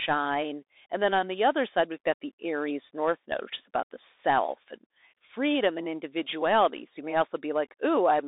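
Speech passed through a Bluetooth CVSD headset codec throughout. Nothing above 3.8 kHz survives. A granular hiss sits underneath, and s sounds turn scratchy from the one-bit coding, which fits 64 kbps.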